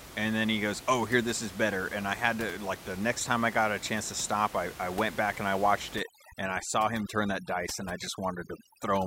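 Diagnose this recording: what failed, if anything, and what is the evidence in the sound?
Overdone noise removal, from 5.96 s to the end of the speech, just after "back and I watched". At the call-processing stage, a noise suppressor set too aggressively gates out frequency bands sitting near its noise estimate. The room noise, about 16 dB below the speech, collapses to near silence with twinkling specks, and the quieter parts of the voice are stripped away.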